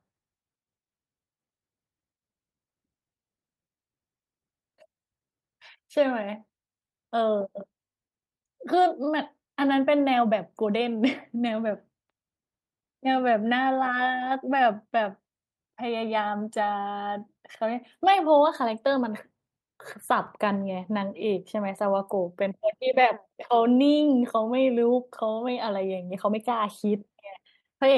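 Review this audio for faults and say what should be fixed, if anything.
There's clock drift between sender and receiver on this speech all the way through. The sender's clock runs about 4% slow, so the receiver's jitter buffer keeps draining and has to pad things out to stay in step. Locking the receiver's playout rate to the sender's clock, or resampling smoothly, would stop this.

Those repeated timing corrections run from 0.12 s to 27.25 s. The receiver keeps repeating short pieces, all in the same direction and unevenly spaced, which adds around a second overall, like playback at 96% speed. Gentle, continuous rate adjustment would hide them better than discrete repeats.

Right at the end there's a short stall from a late packet, at 27.60–27.66 s. The buffer ran dry, the last sound was held for 42 ms until the packet arrived, then playback carried on with nothing lost. A slightly deeper jitter buffer would absorb that delay.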